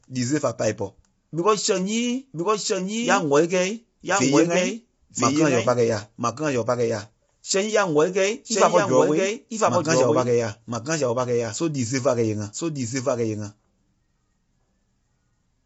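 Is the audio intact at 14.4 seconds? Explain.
No. At 14.4 seconds you hear a doubled audio track: a second, full-band copy of the speech trails about a second behind at roughly the same loudness, with no decay or room colour. It runs through the whole clip, likely from a slower capture path or an out-of-step edit.

The same spot also carries low-delay AAC compression, present throughout. The short frames smear pitch harmonics, so the voice sounds rough and grainy, with noise between harmonics and nothing above 7.7 kHz. That fits AAC-ELD at a bitrate around 24 kbps, the likely cause.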